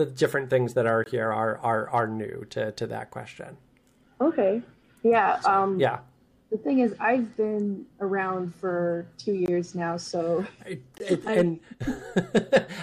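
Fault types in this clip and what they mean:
Block of digital silence: three 20 ms blocks of silence, at 1.04, 9.46 and 10.98 s, each an abrupt short dropout.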